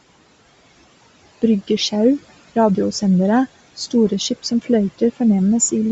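From the start of the speech to its end, the upper band sounds breathy and grainy, with sibilants smeared into a noisy haze. The likely cause is heavy Bluetooth LC3 compression: at a rate that fits a 32 kbps stream with 10 ms frames, the encoder discards much of the high spectrum and fills it with synthetic noise.

Between 4.43 and 4.69 s, the speech is cut by the noise suppressor. The suppressor misjudges part of the signal as background and pulls it down by up to about 14 dB, for around a tenth of a second in total, so those sounds come across swallowed and faint.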